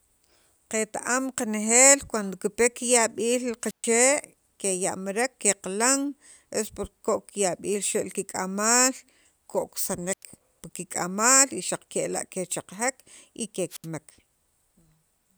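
A brief swell of hiss gives way to a hole of near silence three times: from 3.62 to 3.91 s with about 130 ms muted, from 10.11 to 10.23 s with about 90 ms muted, and from 13.70 to 13.87 s with about 73 ms muted, before the speech resumes. This is wireless microphone squelch dropout: the analogue FM radio link weakened until the receiver's squelch shut its output off, then reopened once the signal recovered.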